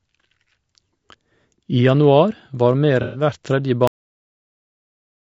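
From start to finish the speech sounds rough and grainy, with a hiss sitting between the harmonics and an upper band that sounds thin and synthetic. This points to low-delay AAC compression, likely AAC-ELD at a rate around 32 kbps. It codes about 500 frequency lines per frame with a low-delay window. At a modest bitrate the gaps between the harmonics fill with quantisation noise, and the top octave is coarsely rebuilt.

From 3.02 to 3.22 s the sound turns smeared and noisy, with a phasey, washed texture in place of clear detail. This is AAC frame loss with concealment. About 120 ms of coded audio, roughly four frames' worth, never reached the decoder. The decoder filled the hole by reusing the last good spectrum with randomised phase and interpolated energy. That keeps the level steady but produces a blurred patch with no real detail in it.

At 3.87 s the audio stops dead mid-sound and drops straight to digital silence for the rest of the clip, with no natural decay. 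This is a cut-off end. The final stretch of output buffers was never written out or played. The waveform is simply truncated wherever it happened to be, which is why the sound breaks off abruptly.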